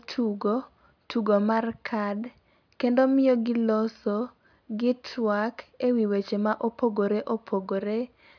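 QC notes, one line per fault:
No fault found in the speech.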